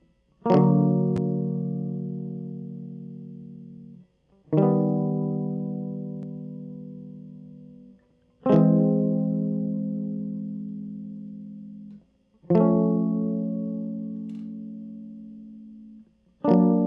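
Music clip with no audible technical faults detected.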